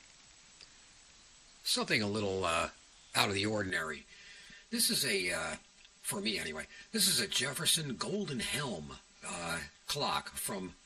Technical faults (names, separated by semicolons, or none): channel delay (comb filtering)